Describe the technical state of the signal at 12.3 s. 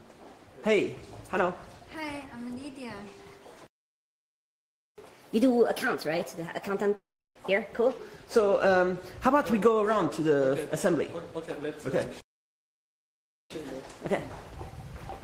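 The sound cuts to silence mid-flow from 12.21 to 13.50 s, about 1.3 s, then resumes: a playback stall, likely the player starved of data or blocked.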